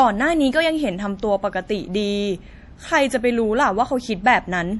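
Speech, with one fault running through the whole clip. The sound has the smeared, watery quality of heavy MP3 compression. The audio is carried at a high bitrate, yet it does not sound like it. This is likely low-bitrate audio saved at a high bitrate. The damage fits an earlier MP3 encode near 48 kbit/s, later re-encoded near 192 kbit/s. The second encode cannot restore what the first removed.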